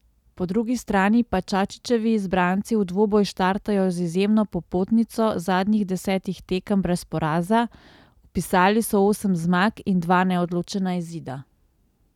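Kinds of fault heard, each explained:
Nothing stood out on listening to this speech recording.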